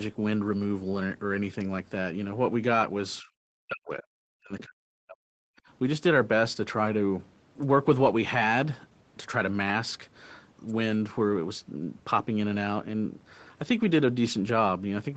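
From 3.21 to 5.43 s the echo canceller was likely caught in double talk, unable to tell the near talker from loudspeaker echo, so it turned both down. The speech is suppressed in double talk: for about two seconds in total it dips, sinking by roughly 40 dB at its deepest.

Within that stretch, at 4.59 to 4.64 s, the canceller likely failed to remove all of the loudspeaker signal from the microphone, so the other side's voice leaks through. It is a brief scrap about 20 dB below the main speech.

At 5.59 to 5.68 s the echo canceller clamped the microphone hard while the loudspeaker played, and the background is gated by the echo canceller. The room sound drops by about 26 dB for roughly a tenth of a second, then returns.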